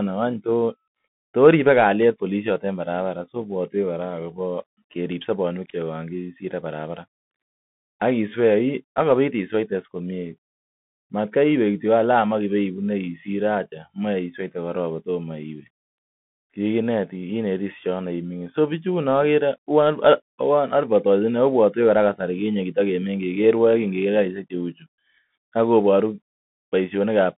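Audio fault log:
Throughout: Bluetooth CVSD headset codec. The speech is thin and boxed in, confined to roughly 150 Hz to 3.6 kHz with nothing above 3.8 kHz, while s sounds turn scratchy and a granular hiss sits underneath. It is a one-bit up-or-down coder whose adaptive step lags fast high-frequency detail, which fits a 64 kbps headset link.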